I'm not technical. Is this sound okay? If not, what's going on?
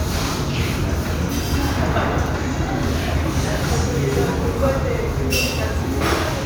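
Yes, nothing stood out as wrong when listening to this sound.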